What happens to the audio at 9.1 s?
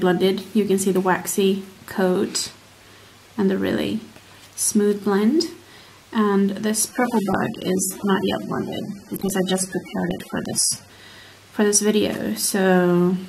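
At 9.1 s the sound is inside a stretch of adaptive stream at a lower bitrate, running from 6.89 to 10.89 s. The player switched to a cheaper encoding when throughput fell, and the sound fits a drop from 96 to 24 kbit/s AAC. Nothing above 13.8 kHz survives, and coding artefacts thicken. Unlike a dropout or packet loss, there is no gap, only an abrupt step down in quality and an equally abrupt return.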